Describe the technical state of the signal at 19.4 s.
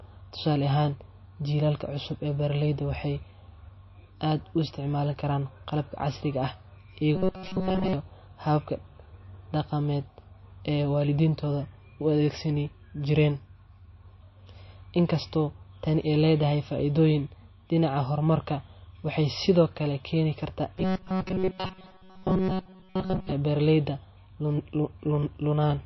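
At 19.4 s the speech carries the same damage heard across the whole clip, most likely MP3 compression at a very low bitrate. Nothing reaches above 5.8 kHz, and weak frequency lines flicker on and off between frames, giving a watery, swirly texture and smeared attacks that a simple low-pass filter would not cause.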